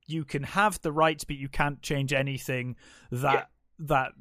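Nothing stood out as a fault on listening to this speech recording.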